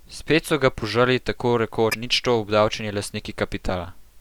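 At 1.87 to 1.94 s, damaged data in the compressed stream makes the decoder misread frames and lose sync, producing a brief glitch in the speech.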